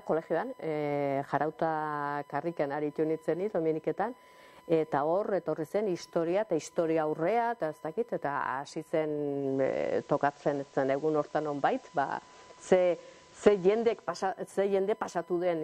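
USB whine from current drawn in 1 ms bus frames leaks into the audio path, leaving a steady 1 kHz tone throughout, roughly 30 dB below the sound. Between 9.32 and 14.27 s, digital radio blending to analogue occurs: the receiver loses the digital signal and cross-fades over 417 ms to FM. Hiss rises to roughly 30 dB below the sound, and the level shifts by about 1 dB.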